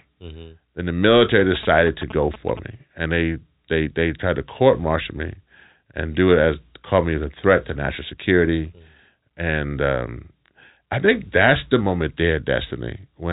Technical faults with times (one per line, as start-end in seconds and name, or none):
1.40-2.59 GSM signalling bursts